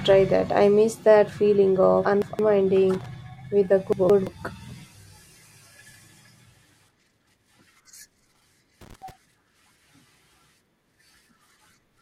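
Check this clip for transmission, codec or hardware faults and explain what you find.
Two kinds of fault are audible: chunks out of order, three times, and loose connector crackle, twice.

Chunks out of order occur at 2.05 to 2.39 s, 3.93 to 4.27 s (just after "with a"), and 7.00 to 7.34 s. Each time one block of about 171 ms arrives a block late and plays after the one that should follow it. Nothing goes missing, but the speech sounds briefly scrambled. Each one leaves three hard joins.

Loose connector crackle appears at 2.94 to 3.06 s, just before "with a", and again at 8.81 to 9.11 s. A worn or dirty contact is making and breaking rapidly as it moves. The signal is chopped on and off many times in a short span, and any DC on the line turns each break into a pop. It sounds like an irregular burst of scratchy crackle over the speech.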